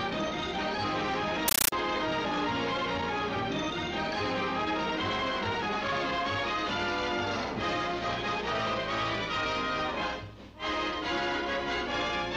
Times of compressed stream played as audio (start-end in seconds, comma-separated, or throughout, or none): 1.48-1.72